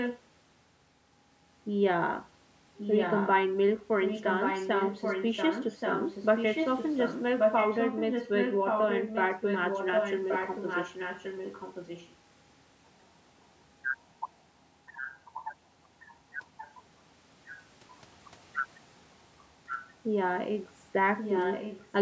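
An echo leak, likely from a far-end loudspeaker whose echo canceller let part of the speech back into its microphone, returns a copy of the talker 1.13 s late at 0.0–0.2, 2.77–3.29, 4.01–12.14, 15.99–16.75, 19.67–19.92 and 21.17–21.91 s. The copy sits only slightly below the live speech in most stretches, including the long one from 4.01 s, but is much fainter at 15.99 and 19.67 s. It is heard as a second, delayed voice repeating the talker.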